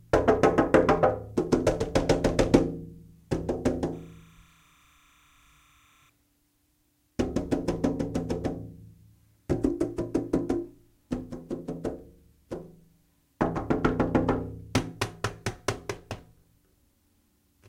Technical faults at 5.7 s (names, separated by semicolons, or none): timecode bleed